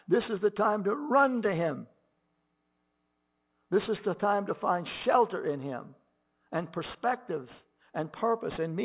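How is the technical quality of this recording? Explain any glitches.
The recording has one fault, present throughout: aliasing. Sibilants sound gritty and metallic, and the speech is crowded right up to 4 kHz. Energy from above that edge has folded back to wrong pitches about 20 dB below the speech, which fits a drop from 48 kHz to an 8 kHz rate with no anti-alias filtering.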